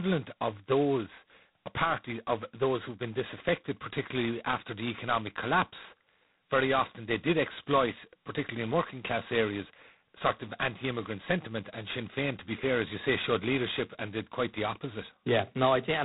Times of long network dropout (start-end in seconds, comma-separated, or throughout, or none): none